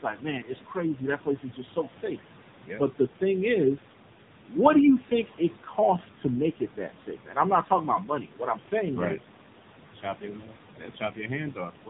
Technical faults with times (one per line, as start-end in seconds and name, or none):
0.00-11.90 noise suppressor artifacts
0.00-11.90 AMR narrowband mobile codec